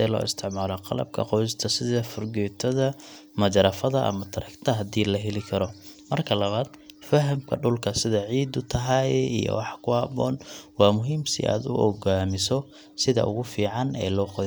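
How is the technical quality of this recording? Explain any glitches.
No technical faults are audible.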